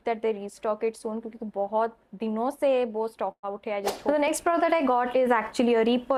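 A burst of packet loss hits the audio from 3.31 to 3.52 s: about 120 ms goes missing, concealed by roughly 115 ms of stretched, fading sound and then a 60 ms silence. On a spectrogram, frozen bands fade, leaving a blank gap before resuming.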